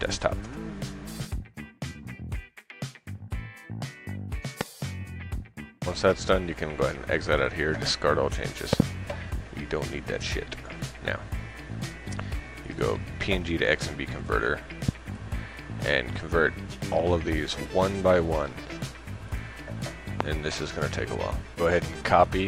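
Loud pops occur at 4.61–4.63 s, 8.73–8.82 s (a double pop), 14.89–14.91 s and 20.21–20.23 s. They stand about 20 to 25 dB above the sound, which continues underneath. Each is likely a brief voltage spike.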